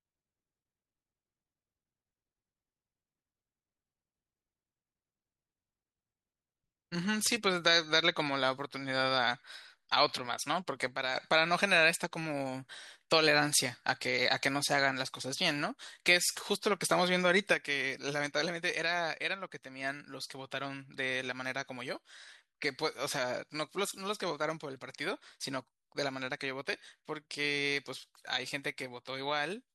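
Speech that abruptly falls about 6 dB quieter from 10.88 to 11.16 s, then drops again at 17.54 s and stays down to the end. The likely cause is one channel dropping out: losing one stereo side halves the common signal in the mono sum.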